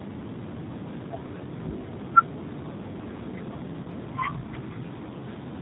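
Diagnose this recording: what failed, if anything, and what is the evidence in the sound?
Throughout, the speech sounds rough, slightly synthetic and dull, with nothing above 4 kHz. This is G.729 codec damage at 8 kbit/s, where the codec rebuilds each frame from a filter and a few pulses.

From 3.83 to 3.87 s the speech briefly smears into a buzzy tone or coloured noise that fades. This is VoIP packet loss concealed by the speech codec: the network dropped about 20 ms of audio, consistent with one lost packet, and the decoder extended the preceding sound to fill the gap.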